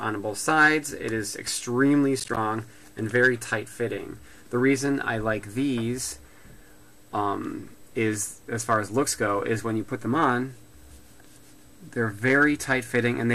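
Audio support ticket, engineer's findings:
Processor overload crackle, 2.20 to 2.37 s. A short burst of gritty crackle from a run of tiny silent dropouts with hard edges. Probable component: audio processing thread or CPU load. Mechanism: repeated missed buffer deadlines, with gap spacing that fits buffers of roughly 10 ms. The burst clears once the load passes.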